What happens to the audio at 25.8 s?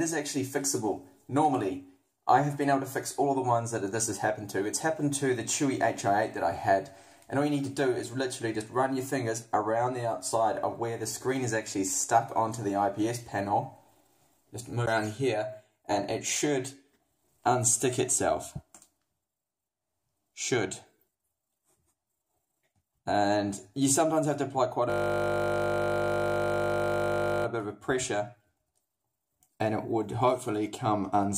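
At 25.8 s the audio is caught in a system hang loop, running from 24.9 to 27.46 s. The system froze while the sound hardware kept replaying the same 20 ms ring buffer, so one tiny slice repeats exactly, heard as a steady 50 Hz buzz.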